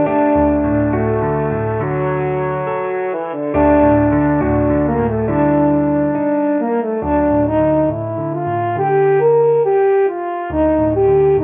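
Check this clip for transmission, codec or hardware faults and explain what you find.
Aliasing runs through the whole clip. The sample rate was reduced without an anti-aliasing filter, which fits a drop to roughly 6 kHz, so content above 3 kHz folds back into the band at unrelated pitches, roughly 30 dB below the signal, leaving bright sounds gritty and metallic.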